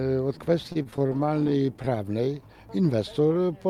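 Repeated stalls (stutter) run from 0.67 s to 2.01 s, where the audio catches and hesitates about 30 times. Packets arrived late or slower than playback consumed them, so the jitter buffer kept running dry. Each time, the receiver extended the last sound to cover the wait, with gaps of up to 29 ms and about 338 ms bridged in total, a quarter of that stretch. Nothing is lost, but the flow drags and judders.

Jitter buffer slow-down follows from 2.96 s to 3.68 s. With its reserve low, the receiver rebuilt it by repeating single pitch periods or slivers of pauses many times over, adding about 91 ms. Playback there runs at 88% speed with the pitch unchanged, so sounds stretch out and feel slightly sluggish.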